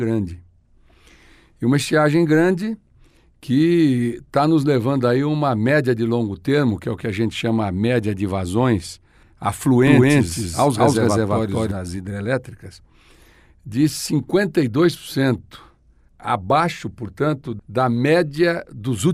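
From 9.87 to 11.71 s, a doubled audio track: an equally loud copy trails about a fifth of a second behind, likely from a slower second capture path. The waveform shows every shape repeated, with abrupt edges.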